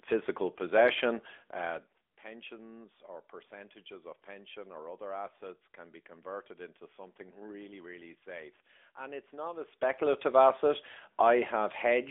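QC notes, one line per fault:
throughout, AMR narrowband mobile codec: the speech went through the AMR-NB mobile coder, and its damage fits a middle mode around 10.2 kbps. The band runs only 300 Hz to 3.5 kHz, so the voice sounds thin and muffled, with a plainly buzzy, synthetic edge from the pulse-driven vocal-tract model.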